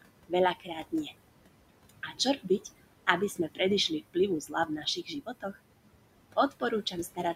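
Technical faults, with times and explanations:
Throughout, noise suppressor artifacts: the room noise, about 14 dB under the speech, gets pulled down about 21 dB frame by frame, so it sinks between words and rises under them.
0.02–1.12 s, 1.89–2.5 s, 3.07–5.57 s, 6.36–7.35 s, speech cut by the noise suppressor: soft bits mistaken for noise drop about 15–20 dB, and a few hundred milliseconds in each sound swallowed.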